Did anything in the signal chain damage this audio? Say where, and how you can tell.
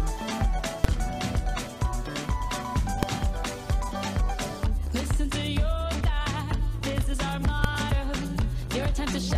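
Yes: loud single bangs at 0.84, 3.03 and 7.64 s are invalid numbers at full scale, where a processing calculation failed and pinned brief blocks to maximum level.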